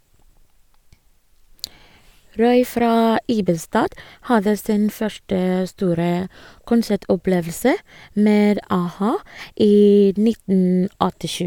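No technical faults occur at any point in this speech recording, so there are none to describe in time order.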